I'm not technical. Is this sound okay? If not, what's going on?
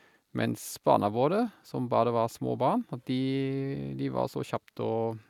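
Yes, I can't hear anything wrong with this speech recording. No technical faults turn up anywhere in it.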